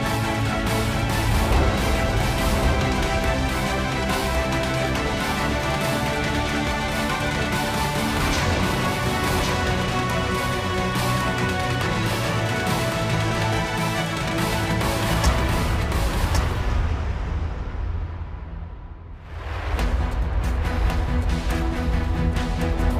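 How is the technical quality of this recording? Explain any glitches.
The recording has one clear fault: a doubled audio track that runs through the whole clip. Every sound is followed about a second later by a second, full-band copy, roughly 5 dB quieter, with no decay or room colour, so it reads as a flat, detached repeat rather than an echo. This is likely a second capture through a slower path being mixed back in. On a waveform, each burst reappears as a slightly smaller twin about one second later; a spectrogram shows the same full-range pattern repeated, offset in time.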